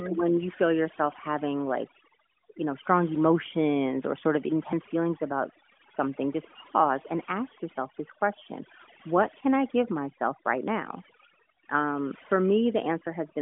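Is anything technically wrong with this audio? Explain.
Yes. Overdone noise removal affects the whole clip. A noise reduction stage set far too aggressively mutes any frequency band whose level sits close to its noise estimate. The background drops and breaks up into twinkling specks, and the quieter parts of the speech are cut along with the noise. This sits on top of a mobile narrowband channel with nothing above 3.7 kHz, whose light coding fits AMR-NB's 12.2 kbps mode.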